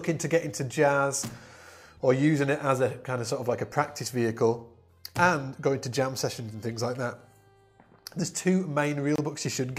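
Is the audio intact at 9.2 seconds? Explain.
No, there is a gap at a join of encoded pieces from 9.16 to 9.18 s, a silence of about 26 ms. Separately encoded sections were spliced without trimming their encoder delay and padding. Unlike a dropout, the sound resumes exactly where it stopped, with smeared edges.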